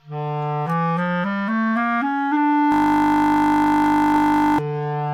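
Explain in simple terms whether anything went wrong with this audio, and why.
From 2.72 to 4.59 s the sound freezes into a steady buzz, a system hang loop. The computer stalled while the sound hardware kept replaying one 20 ms scrap, 50 times a second. The piece is so short that it hums rather than stutters.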